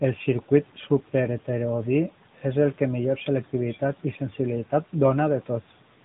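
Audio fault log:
Throughout: AMR narrowband mobile codec. The speech has been through AMR-NB, the 2G/3G phone codec, which resamples to 8 kHz and rebuilds each 20 ms frame from a vocal-tract filter excited by a handful of pulses. Nothing above 3.8 kHz survives, so sibilants and consonant edges are dulled. The codec damage is plainly audible as a buzzy, synthetic edge on the voice, which fits a mid-rate mode of about 10.2 kbps.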